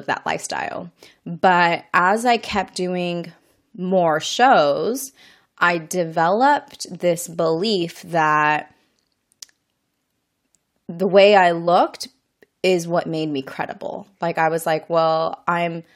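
Compressed frames skipped: whole 23.2 ms frames of the speech never reached the output, so it jumps ahead. This happens at 7.81 s after "shows I developed this" (about one frame), at 11.67 s after "the way I" (about three frames, roughly 70 ms), and from 12.99 to 13.01 s before "made me credible" (one frame).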